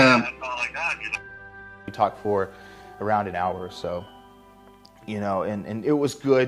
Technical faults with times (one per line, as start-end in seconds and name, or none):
1.15-1.17 skip ahead
1.21-4.07 jitter buffer speed-up